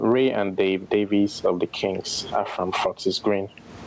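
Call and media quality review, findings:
Gain pumping, throughout the speech: input gain far too high, likely a fast limiter clamping it on every loud syllable. Gain swinging around 20 dB; loud and soft parts flattened, squashed sound.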